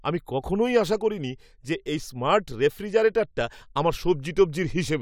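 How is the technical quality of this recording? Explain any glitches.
No glitches can be heard in this speech recording. Nothing in it breaks, drops out or distorts at any point.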